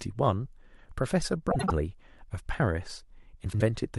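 A speech clip with two bursts of frames out of order, at 1.51 to 1.71 s and 3.44 to 3.62 s. In each, two adjacent blocks of about 78 ms, which fits three frames apiece, play swapped, giving a brief garbled flutter with no lost time. On a spectrogram, harmonic tracks and formants jump abruptly at each join. The waveform shows matching discontinuities where the envelope is displaced.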